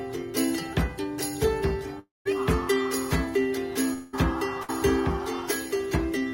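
At 1.99 s the sound breaks off until 2.27 s. The last sound is stretched into a fading continuation, then about 0.16 s of silence. At 3.93 s a shorter gap runs to 4.15 s, filled entirely by the fading continuation. Both are likely long network dropouts, losing about 0.26 s and 0.2 s of audio.

At 4.63 s comes a burst of packet loss lasting to 4.70 s. About 60 ms never arrived. The receiver held the last sound briefly and faded it, and the audio resumes slightly further on.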